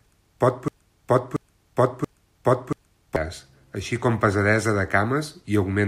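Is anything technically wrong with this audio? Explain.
Yes. From 0.68 s to 3.16 s there is a broken-record loop: a 0.68 s slice of the speech plays four times back to back, with the speech that belonged there missing. The likely cause is a stalled player or stream resending its last buffered fragment. On a waveform or spectrogram, the same block repeats at identical 0.68 s intervals.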